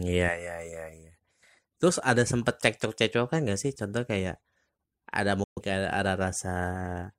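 At 5.44 s the speech cuts out almost instantly, with a fade of only about 3 ms, and stays silent until 5.63 s. This is a digital broadcast dropout: the receiver muted through roughly 128 ms of bad data, which fits about three lost frames, and that audio is gone.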